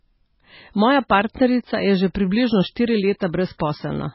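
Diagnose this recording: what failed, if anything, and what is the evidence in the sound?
The codec stage failed, and MP3 compression is the likely cause. Across the whole speech clip, nothing sounds above 5.6 kHz. The encoder dropped the treble at a fixed cut-off. The damage is heavy. The sound has a watery, swirling texture as weak frequency lines drop in and out between frames. Consonant attacks smear. A bit budget that tight fits a very low bitrate, around 16 kbps.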